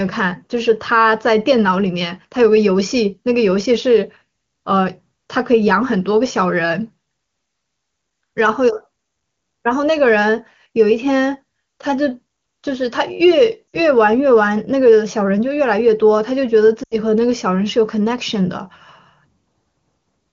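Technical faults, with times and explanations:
13.68 to 13.77 s and 16.83 to 16.96 s, lost AMR speech frames: radio errors corrupted consecutive frames, so the wideband decoder repeated the last good pitch and vocal tract settings at falling gain, giving brief gaps of about 60 ms and 80 ms that drop to near silence within two frames, before the speech resumes weak or rough for a moment.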